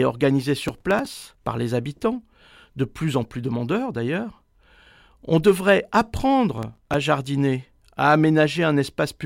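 From 0.68 to 1.44 s, just before "par les habitants de", the speech carries a burst of processor overload crackle: a gritty tearing laid over the sound. It fits a processor repeatedly missing deadlines on very short buffers of around 5 ms, each miss replaying a sliver of old audio with hard edges, perhaps fifteen in all. A shorter burst of the same kind runs from 6.58 to 6.94 s, ahead of "jardiner à", consistent with about seven missed buffers.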